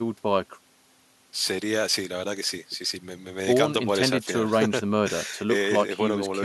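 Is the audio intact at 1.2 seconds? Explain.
Yes, the audio is intact at 1.2 seconds, with no fault audible at that moment.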